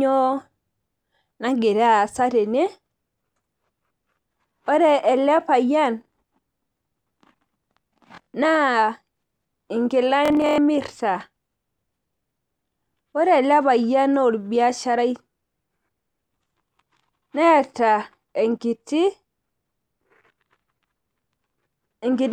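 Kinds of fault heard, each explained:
Bluetooth stutter: lost packets make the receiver replay its last short slice, a buzz; the waveform shows identical repeated blocks, the spectrogram vertical stripes.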